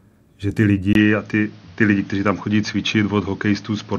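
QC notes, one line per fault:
0.93–3.99 s, input switched to a poorer device: after "že ty" comes a 20 ms gap, then dull, boxy speech with nothing above 6.6 kHz and new noise about 35 dB down at unchanged level, likely a narrower-band microphone taking over. Spectrogram: brief blank column, then a hard ceiling.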